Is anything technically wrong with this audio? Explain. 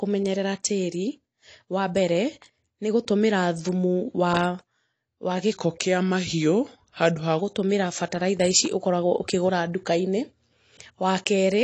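Yes. There are two faults. The speech has AAC compression damage throughout, likely from AAC-LC at a low bitrate, near 32 kbps. Nothing is present above 8.7 kHz. The encoder dropped the top band and quantised the rest coarsely. The speech sounds dull, smeared and fizzy on sibilants.

From 5.53 to 7.39 s, just before "gũtũmĩra bataraitha ici", a section plays at the wrong speed. It runs at 0.893 times normal, likely from playback on a mismatched clock. Speed and pitch drop together, by about two semitones. The speech turns deeper and slower.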